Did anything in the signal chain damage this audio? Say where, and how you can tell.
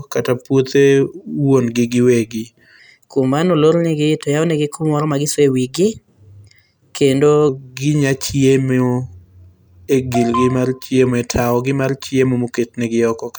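Yes. From 2.79 to 7.49 s, a section at the wrong speed plays 1.12 times fast, lifting the speech about two semitones. It likely comes from an editing or playback stage running on the wrong clock. On a spectrogram, the harmonics step upward there and syllables look compressed.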